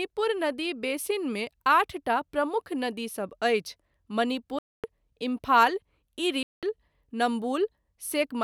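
It's a speech recording with two short dropouts into dead silence, one from 4.59 to 4.84 s lasting about a quarter of a second, and another from 6.43 to 6.63 s lasting about 200 ms. Each time the speech just stops and then carries on. That pattern points to a Bluetooth stall, likely interference holding up packets so the headphones' buffer runs empty and playback waits for the resent audio.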